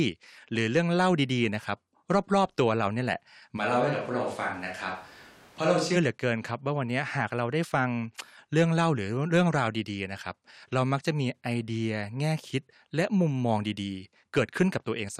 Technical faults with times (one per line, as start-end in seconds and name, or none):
3.59-5.95 switch to a distant microphone